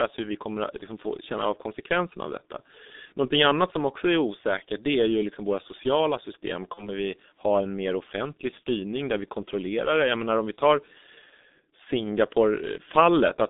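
It's a speech clip squeezed through the G.723.1 codec for its whole length. The sound sits in a narrow band from about 200 Hz to 3.7 kHz, and the heavy coding leaves it muffled and hoarse with smeared consonants, which fits that codec running at about 6.3 kbit/s. On top of that there's VoIP packet loss concealed by the speech codec in three places. At 3.05 to 3.12 s, right after "av konsekvenserna av detta", the decoder papers over what sounds like about 60 ms of missing audio. At 6.74 to 6.89 s, between "liksom våra sociala system" and "vi ha en mer", there's another gap, and there's a brief one at 8.60 s, between "ha en mer offentlig" and "där vi kontrollerar det". Each time the decoder keeps extending its last pitch and filter at a falling level, so you get a short buzzy or noisy, fading stretch, and the next bit stays weak or rough until the codec catches up.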